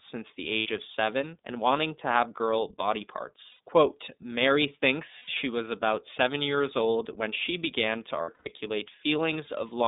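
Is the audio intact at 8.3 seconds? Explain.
No. Between 8.21 and 8.48 s, lost iLBC frames (about 180 ms of audio gone, longest run roughly a tenth of a second) are concealed by repeating the last pitch cycle mixed with noise, giving a held, buzzy vowel. Throughout the speech, the iLBC codec limits the line to 200 Hz to 3.7 kHz and adds a plainly audible rough, synthetic quality, which fits 30 ms frames at 13.33 kbps.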